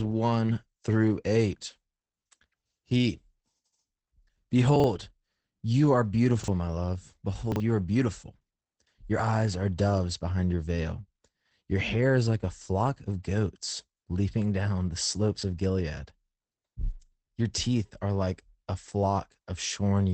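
Chunks out of order at 4.76, 6.4 and 7.52 s in this speech recording: each time a 40 ms piece of audio plays one slot late, after the piece that should follow it, so the sound briefly jumbles across three hard joins. Opus voice compression runs throughout: the SILK linear-prediction coder leaves nothing above 8.6 kHz and codes the excitation coarsely, making the speech plainly muffled, hoarse and slightly robotic, which points to a low bitrate of around 12 kbps.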